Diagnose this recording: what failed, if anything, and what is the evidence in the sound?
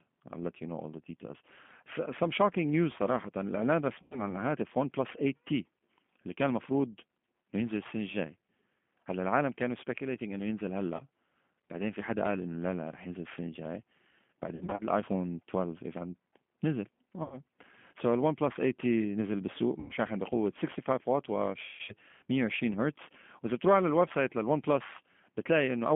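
Codec stage: G.729 coding throughout limits the speech to 200 Hz–3.4 kHz and adds a rough, synthetic texture, unlike clean band-limiting, which stays smooth.

Network stage: VoIP packet loss concealed by the speech codec at 4.02, 10.96, 14.55, 17.23, 19.80 and 21.64 s. The decoder stretches the last sound into a fading buzz or coloured noise, not silent dropouts, then recovers weakly.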